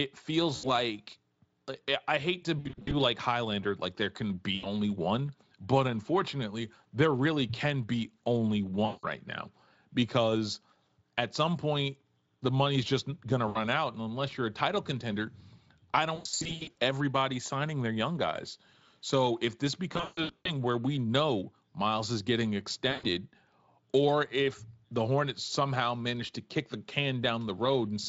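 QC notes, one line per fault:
0.55–0.67 s, 2.59–2.96 s, 4.55–4.73 s, 8.85–9.06 s, 13.47–13.58 s, 16.15–16.75 s, 19.93–20.52 s, 22.91–23.06 s: VoIP packet loss concealed by the speech codec. Each dropout is filled with a stretched, buzzy or hissy continuation of the previous sound that fades, because the decoder repeats its last pitch and spectral shape at falling gain. The 8.85 s gap falls between "really can be only" and "now because at some", and the 13.47 s gap follows "money's just going to". The longer spans at 2.59, 16.15 and 19.93 s lose 200 to 400 ms in scattered runs. The 16.15 s span ends just before "everybody signing their young". These longer spans stay weak and smeared as concealment builds frame on frame. The underlying Speex encoding, which suggests a rate around 28 kbps, is heard only as a light hoarseness.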